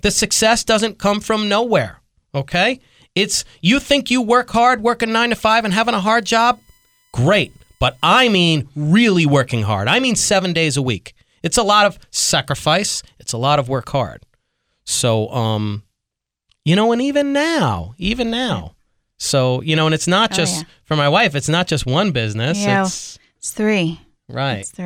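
Speech clip: USB bus current leaking through power or ground puts a steady 1 kHz whine, strongest at 2 kHz and about 40 dB down, under 5.19–8.44 s, between "you work hard working" and "really working hard I".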